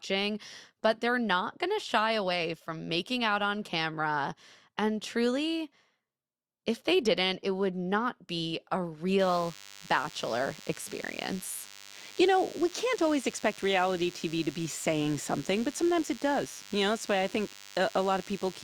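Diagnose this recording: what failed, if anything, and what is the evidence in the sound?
The analogue wiring picked up DECT cordless phone buzz. From 9.19 s, right after "would not be a", a steady, thin buzz at 100 Hz with a dense set of harmonics sits under the speech and runs to the end of the recording, at roughly 20 dB below the speech level. A nearby DECT handset or base transmits a short radio burst every 10 ms; an analogue input stage rectifies that envelope, turning the 100 Hz burst rate into audible buzz.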